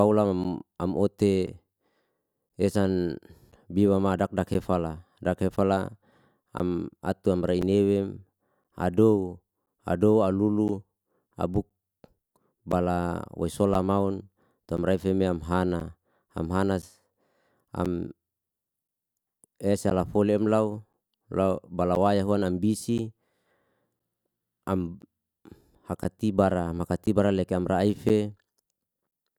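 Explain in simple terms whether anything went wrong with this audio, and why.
Something on the computer kept interrupting the connection to the audio device at a steady rhythm, a fault known as periodic USB or driver dropouts. Each time, roughly a hundredth of a second of the recording was lost and replaced with silence. You hear this as a small regular tick or gap in the speech about once a second, 1.024 seconds apart, about thirty times from 0.44 s to 29.12 s.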